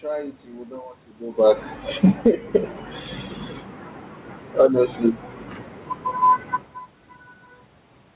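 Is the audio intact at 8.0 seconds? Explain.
Yes, the audio at 8.0 seconds is intact, with no fault present at that moment.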